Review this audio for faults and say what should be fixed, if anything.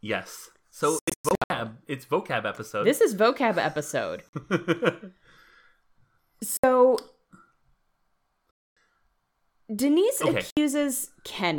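Sharp silent holes at 0.99 to 1.50 s (several short gaps), 4.29 s just after "is vocab episode", and at 6.57, 8.63 and 10.50 s are likely Bluetooth dropout: packets missed their deadline and playback skipped ahead. On the waveform they appear as flat-line gaps, and on the spectrogram as blank vertical bands with hard edges. To prevent this, keep the headphones close to the source with a clear line of sight, and move them away from busy 2.4 GHz traffic.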